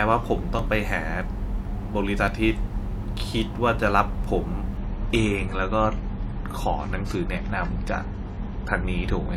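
At 0.59 s and again at 2.28 s the speech jumps, the mark of a dropped buffer (overrun), likely caused by the program failing to read its samples before the hardware overwrote them. A few milliseconds go missing at the first point and only a couple at the second, and the audio on either side is spliced together with no gap. On a waveform each shows as an abrupt discontinuity. A spectrogram shows a thin vertical broadband line.

From 4.77 s to the end of the clip the sound turns more processed, with more audible codec artefacts. This is an adaptive stream at a lower bitrate. The player switched to a leaner encoding when the connection slowed, which fits a step down from about 96 to 32 kbit/s AAC. The change is sudden and there is no gap.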